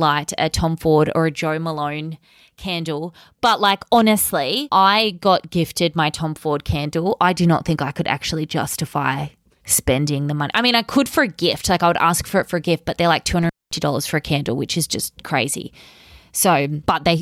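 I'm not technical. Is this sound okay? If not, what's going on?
No. At about 13.42 seconds, just after "gift but they're like", the speech suddenly drops out with a crackle, leaving faint hiss, then returns at 13.79 seconds before "for a candle which". This is an intermittent contact: a loose cable or plug briefly lost connection for about 0.22 seconds.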